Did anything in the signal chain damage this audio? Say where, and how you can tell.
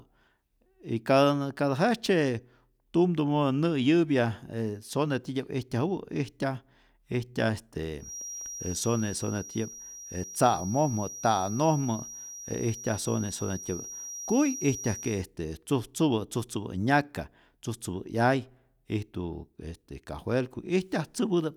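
Yes. From 7.97 s to 15.27 s a thin, steady whistle at 5.7 kHz sits well below the speech, swelling and fading slowly in level. This is a feedback whistle, likely from a loudspeaker-to-microphone loop held just at the edge of feedback, so one frequency rings without running away.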